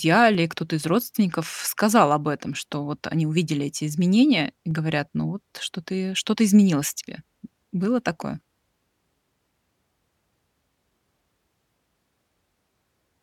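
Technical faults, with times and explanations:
0.35 to 11.24 s, clock drift buffer slips: regular clicks every 2.18 s, about seven. Likely mismatched clocks, roughly 150 ppm apart, each dropping or repeating about 15 samples.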